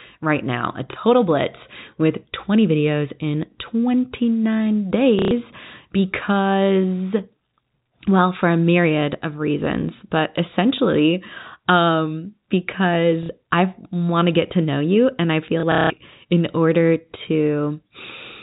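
A small blip breaks the speech at 0.93 to 0.96 s, and short robotic stutters at 5.19 to 5.31 s, 13.23 to 13.29 s, and across 15.6 to 15.9 s, where about 210 ms goes missing in scattered gaps, the longest run 180 ms. This is packet loss with the last packet repeated: the receiver replays the previous chunk of audio until fresh data arrives. The gap lengths fit 30 ms packets, so longer runs buzz near 33 Hz. The fixed-line G.711 telephone band carries the speech throughout.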